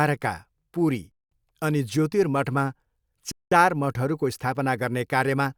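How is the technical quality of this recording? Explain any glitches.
The speech is broken by a gap between chunks, twice. The audio was delivered in 2-second chunks, so silence fills each join. That produces hard-edged 200 ms holes at 1.12–1.32 s and 3.32–3.52 s. No speech is lost, but it stops abruptly and resumes.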